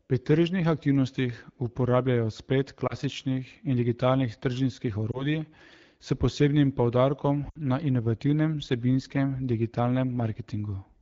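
Lost AMR speech frames at 2.87 to 2.95 s and 5.11 to 5.26 s give quick warbly dips, each fitting one lost 20 ms frame. At 7.49 to 7.58 s, about three lost frames fade the speech to near silence as the decoder reuses stale settings.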